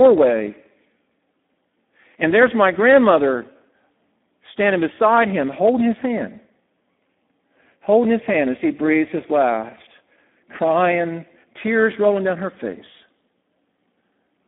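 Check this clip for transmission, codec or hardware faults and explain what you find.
One codec fault runs through the whole speech clip. Speex codec damage is heavy throughout. The CELP coder has too few bits for the excitation, which fits a setting near 8 kbps. Speech sounds noisy and hoarse. It sits in a 200 Hz to 3.5 kHz line band, with nothing above 3.8 kHz.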